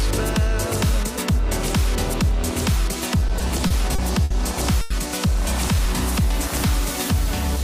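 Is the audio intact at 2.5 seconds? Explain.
Yes, at 2.5 seconds the audio is intact, with no dropout, click, distortion or other fault to be heard at that moment.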